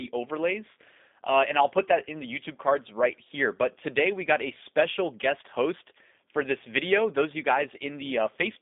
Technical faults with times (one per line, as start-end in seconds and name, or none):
0.00-8.61 G.729 codec